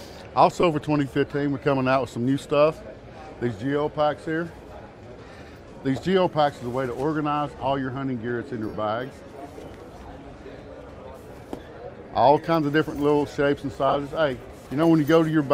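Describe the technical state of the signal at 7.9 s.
At 7.9 s the signal is intact, with no dropout, clipping or other fault at that moment, and only the light coding of a lossy codec present.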